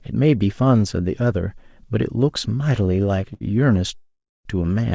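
At 3.34 to 3.43 s there is a short stall from a late packet. A packet missed its playout time, the jitter buffer emptied, and the receiver stretched the last sound by about 67 ms until it arrived. The speech resumes where it stopped with nothing lost, just one sound held unnaturally long with a faint buzz or dip.

From 3.95 to 4.47 s a call audio freeze follows, likely from packets held up in transit draining the jitter buffer. The last sound is extended as a fading buzz or hiss, then falls to silence for about 290 ms, with roughly half a second inserted in total. When the audio picks up again it continues from the same point. The G.722 path band-limits it to nothing above 8 kHz.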